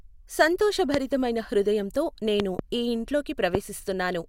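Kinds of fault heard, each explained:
Loud pop: at 0.94–0.97 s, 2.40–2.61 s (a double pop) and 3.55–3.57 s, sharp thumps about 20 dB above the speech cut through while talking continues underneath, likely voltage spikes from a switch, static discharge or driver glitch reaching the signal path.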